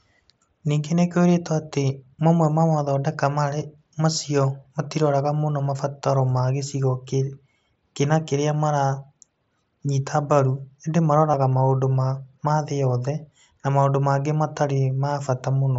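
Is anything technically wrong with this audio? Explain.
Yes. At 5.65 s, and again from 11.32 to 11.34 s, the speech briefly turns into a short, buzzy held tone, with a slight warble as normal sound returns. This is concealed Bluetooth headset packet loss. Headset packets carrying 15 ms and 22.5 ms of audio were lost, and the receiver filled each gap by repeating the closest-matching recent stretch of waveform. The wideband mSBC link itself adds only light grain.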